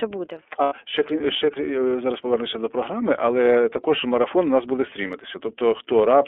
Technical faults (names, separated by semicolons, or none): iLBC codec; lost iLBC frames